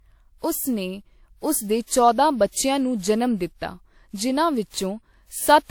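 From start to finish the speech has that swirly, hollow, smeared quality of generation loss, with attacks blurring. It's likely been through a lossy encoder about four times, which fits repeated WMA passes near 96 kbit/s, each re-quantising on a fresh frame grid. Content stops around 20.1 kHz.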